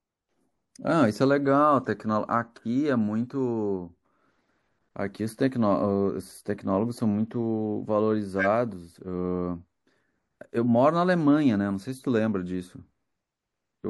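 Speech, with two short bursts from a corrupt frame decoded. At 1.85 s there is a tiny blip where what sounds like a couple of damaged frames were played. From 8.39 to 8.46 s a roughly one-frame squeak shows as a narrow smear of energy at wrong frequencies on the spectrogram, breaking the harmonic pattern.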